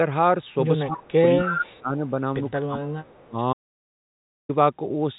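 Right at 0.85 s the talker dips by roughly 15 dB until 1.12 s, and underneath it, from 0.86 to 1.11 s, there's a faint second copy trailing 226 ms behind, about 20 dB down. That's likely an echo leak: the far end's loudspeaker is feeding its own microphone and the canceller isn't scrubbing all of it. The dip itself is likely speech suppressed in double talk. Both sides are active, the canceller can't tell its own talker from the echo, and it ducks everything.

The same pairing returns harder from 1.34 to 1.95 s. The voice drops by up to about 20 dB, and between 1.42 and 1.77 s the delayed copy comes up to only about 5 dB under the speech. Smaller echo scraps follow at 1.97 to 2.12 s (about 30 dB down) and 2.28 to 2.51 s (about 35 dB down), still 226 ms late. There's another suppression stretch from 2.65 to 3.37 s, again up to about 20 dB deep, with leaked echo at about 30 dB down between 3.02 and 3.27 s.

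Then at 3.53 s the audio goes completely dead until 4.49 s, almost a full second of silence with no room tone at all. That's an audio dropout to silence, likely from the input being lost while the recorder kept writing silence. Whatever happened in that gap is simply gone. Throughout, the G.711 call path keeps everything below 4 kHz, which gives the familiar narrowband phone sound.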